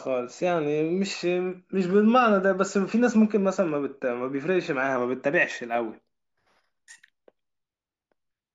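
From 5.69 s to the end, the speech shows imaging from linear upsampling, which fits a 16 kHz source raised to 44.1 kHz by straight-line interpolation. Highs dull, and a faint mirrored band between 8 kHz and 16 kHz, roughly 35 dB down, adds metallic shimmer on sibilants. Unlike aliasing, these images sit above the original band rather than folding down into it.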